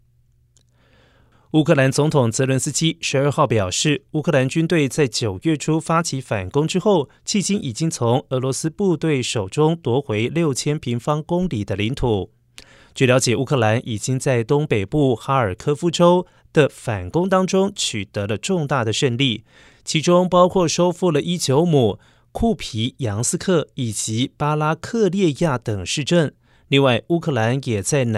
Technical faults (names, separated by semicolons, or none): dropped samples